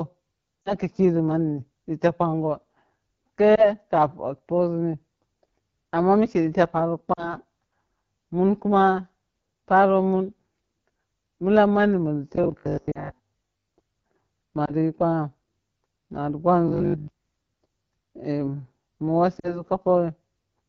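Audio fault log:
Throughout: AMR wideband (HD Voice) codec at 8.85 kbit/s, one of the lowest rates. The speech is rebuilt from a pulse-excited vocal tract model up to 6.4 kHz, with the band above filled by shaped noise rather than real detail. At this rate the model is starved of bits, so the damage is plainly audible: the speech sounds rough and raspy, with a grainy edge on voiced sounds and a hissy, synthetic top end.
0.62 to 0.73 s, 3.55 to 3.68 s, 7.13 to 7.34 s, 12.91 to 13.10 s, 14.65 to 14.72 s, 19.39 to 19.63 s: lost AMR speech frames, each one or two frames, about 20 to 40 ms of audio. The decoder reuses the last good pitch and vocal tract settings with falling gain, so each event is a brief warble or dip that fades quickly. The first one comes right before "ka kiri", and there the speech resumes weak and rough for a moment.
12.36 to 13.72 s, 16.68 to 17.08 s: robotic sound from repeated short buffers. 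Here the speech turns into a rigid, metallic buzz at a fixed 50 Hz that still roughly tracks the syllables, with most of the real audio skipped. The buzz rate points to a 20 ms stretch being looped, likely because new audio arrived too seldom and playback filled the gaps by repeating the last buffer. A frame-loss dropout also falls inside the first stretch.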